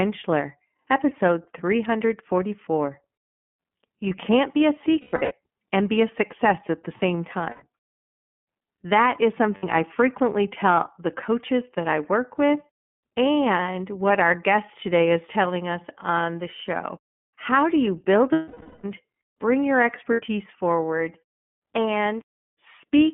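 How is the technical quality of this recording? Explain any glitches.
Technical quality is fair at best. The whole recording sits behind a narrowband VoIP codec, and it has five short dropouts.

The iLBC codec runs throughout. The band is cut to roughly 150 Hz to 3.4 kHz, so the speech sounds muffled and phone-like. Each frame's excitation is coded on its own, and the result is a slightly rough, synthetic texture. The character points to the 13.33 kbps mode with 30 ms frames.

The lost iLBC frames fall at 5.01 to 5.32 s (between "can't be a" and "and be a success"), 7.50 to 7.64 s, 9.56 to 9.64 s (just before "I frequently tell the"), 18.32 to 18.84 s, and 20.13 to 20.21 s (after "bring your"). During each gap the decoder keeps repeating the last pitch cycle mixed with noise, so you hear a held, buzzy vowel. The dropouts run about 60 to 510 ms. The first one is about 240 ms scattered over 300 ms, with runs of up to around a tenth of a second. 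The 18.3 s gap is the longest and audibly fades out. Because the frames stand alone, the speech snaps back right after each gap.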